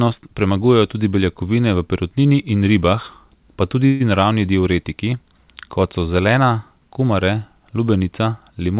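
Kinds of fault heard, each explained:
Call audio freeze: between "perutnini in ribah pa" and "naravni diuretiki", at 3.86 to 4.02 s, the speech stalls and the last sound is stretched into a short fading buzz lasting about 140 ms, with no dead silence. The speech then resumes exactly where it stopped, so nothing is lost, but everything after arrives 140 ms late. This pattern likely comes from delayed packets draining the jitter buffer, with the receiver filling the wait until they arrived.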